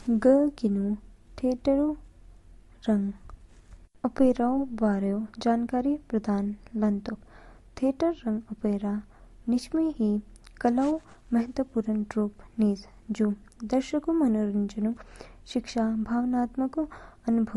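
From start to finish there's a faint switching supply whistle, a thin tone wandering between 13.76 and 16.05 kHz, sitting roughly 40 dB under the speech. The speech itself has nothing above 12.1 kHz and a smeary, doubled-up graininess, likely from transcoding between lossy codecs, with an MP3 pass at around 52 kbit/s followed by Opus at around 48 kbit/s.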